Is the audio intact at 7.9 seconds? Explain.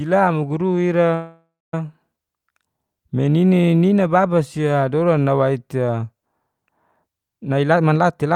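No. A jitter buffer speed-up runs from 7.39 s to the end of the clip at 8.35 s. The receiver's buffer had built up more audio than its target, so it cut out short chunks, each a pitch period or a few, again and again to shrink the delay. About a third of a second of speech disappears this way, and playback runs at roughly 134% speed with the pitch unchanged, so the closing speech sounds rushed and clipped in rhythm.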